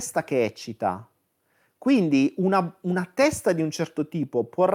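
No audible technical faults at any point in the speech.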